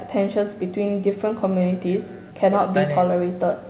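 Loudspeaker playback at the far end leaks into its microphone with no echo canceller removing it, so the speech returns about a fifth of a second later, roughly 24 dB quieter and thin.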